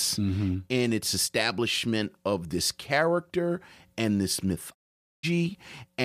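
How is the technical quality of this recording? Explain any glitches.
The speech has one clear glitch, a digital broadcast dropout. Just after "this character and this", at 4.73 s, the sound fades to silence over about 20 ms and stays muted until 5.25 s. The receiver lost valid frames and muted, so roughly half a second of speech is missing rather than garbled.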